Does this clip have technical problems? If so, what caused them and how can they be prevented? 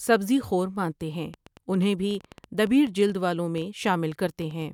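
Yes: after "سبزی خور مانتے ہیں", a train of clicks, about twenty at roughly 6.4 per second, irregularly spaced, runs from 1.34 to 4.63 s at about speech level. This is likely interference or a faulty connection or power supply; unlike random crackle, the clicks match in shape and continue through pauses. Shielding cables and moving away from noisy equipment would prevent it.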